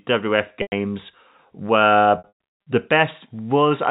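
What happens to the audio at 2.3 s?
Packet loss with pitch repetition hits at 2.18 to 2.32 s. Packets went missing, and the receiver bridged each gap by repeating the last pitch period and fading it out over about 50 ms. Losses are scattered across roughly half a second, adding up to about 340 ms. The longest run, 120 ms, outlasts that fade, so a held, buzzy tone decays into brief silence before the sound cross-fades back in through the narrowband G.711 telephone coding.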